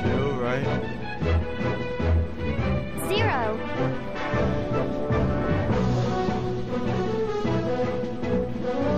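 No technical faults are audible.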